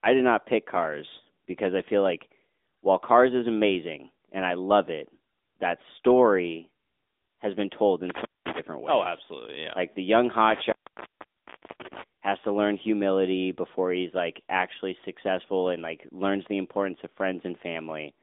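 Throughout the speech, the AMR narrowband mobile codec confines the sound to roughly 250 Hz to 3.6 kHz, with nothing above 3.8 kHz. Plainly audible buzzy, synthetic roughness, which fits a mid-rate mode near 10 kbps, marks it as codec modelling rather than simple filtering.

From 8.10 to 8.59 s and again from 10.50 to 12.02 s, an intermittent contact opens for about 208 ms and then about 1.08 s. Crackle at the edges and faint hiss inside the gaps distinguish these from clean digital dropouts.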